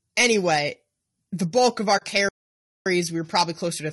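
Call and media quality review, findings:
Low-delay AAC compression, whole clip: speech rough and grainy, noise filling the gaps between harmonics, top band thin and synthetic-sounding. Likely AAC-ELD. Short low-delay frames resolve pitch poorly, and the damage fits a low bitrate around 32 kbps. Unlike packet loss, it is a constant texture, not dropouts.

AAC frame loss with muting, 1.97–2.02 s: a 40 ms hole with soft fade-out and fade-in. The decoder zeroes the missing spectrum, and the overlapping windows taper the edges. The length fits two lost frames. A stall would be longer and hard-edged.

Playback stall, 2.29–2.86 s: speech stops mid-flow for about 0.57 s, then resumes. The cause is likely an output buffer underrun or a blocked audio thread. Unlike the frame loss, the gap is far longer than any codec frame, with no window fade shaping it.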